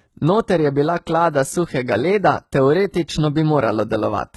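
From start to finish the speech carries heavy HE-AAC compression damage. The treble is rebuilt from copied lower bands rather than coded, so s sounds come out gritty and metallic, and nothing remains above about 11.8 kHz. This likely reflects HE-AAC v2 at a low bitrate, around 16 kbps.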